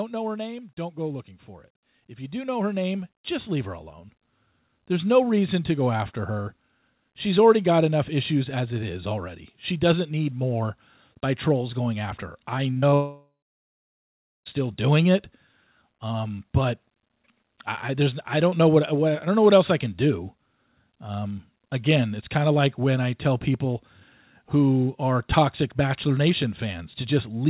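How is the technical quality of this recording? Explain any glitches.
The recording has three distinct problems, all within the first 17 seconds, and they overlap around the 13-second mark.

Just after "know her name", at 0.75 s, the level starts creeping upward and keeps climbing until about 16.54 s, ending roughly 16 dB louder. The speech and the background noise swell together, which points to automatic gain rising. The call's gain control judged the input too quiet and lifted its gain slowly over those sixteen seconds rather than in one step.

Around 12.7 s the speech briefly smears and wobbles in three quick bursts, at 12.72–12.78 s, 12.78–12.84 s and 12.90–12.94 s. These are short concealed packet loss. Chunks of about 40 ms, 40 ms and 20 ms never reached the decoder in time. The receiver bridged each hole by extending the preceding sound, then blended back into the real signal, and that bridging is what produces the smeared texture.

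Straight after, from 12.94 s to 14.47 s, the speech dissolves into a fading continuation and then drops to silence for a little over a second before returning. Whatever was said in that gap is simply gone. The likely cause is a long network dropout. About 1.5 s of audio failed to arrive, and the concealment ran out of material and went quiet until packets resumed.

The call path itself sounds narrowband, with nothing above 4 kHz, as expected for G.711 mu-law at 64 kbps.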